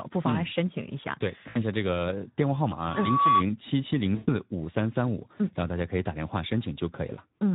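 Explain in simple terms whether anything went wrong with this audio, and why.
Throughout, the speech sounds hoarse and grainy. That is the Speex codec, an older voice-chat compressor working with too little data to keep the voice clean.

From 1.49 to 1.63 s, and again from 4.15 to 4.30 s, the speech smears into a stretched, fading sound. This is VoIP packet loss concealed by the speech codec. Chunks of audio went missing, about 60 ms the first time and 120 ms the second. The decoder stretched out the last sound it had to fill the gaps.

From 2.77 to 3.44 s, a high whistle near 1.1 kHz swells up over roughly half a second. This is loudspeaker feedback squeal, caused by a microphone picking up its own loudspeaker and looping the sound back.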